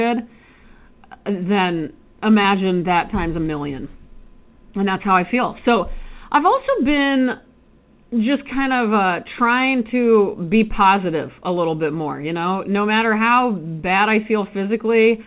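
At 2.42 to 2.46 s, just before "that times a million", the speech briefly smears and wobbles, and the flow of sound blurs. This is short concealed packet loss: about 20 ms of the call arrived too late for the decoder, and the receiver filled that 20 ms gap by extending the preceding sound before blending back into the real signal. It passes through a G.711 mu-law call path with nothing above 4 kHz.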